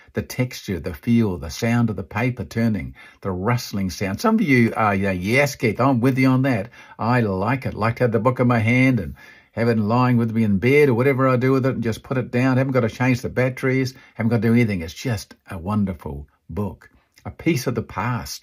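At 4.68 s, just before "are you know yes", a single sharp snap lands on top of the speech, likely an electrical switching spike from a nearby switch arcing into the line.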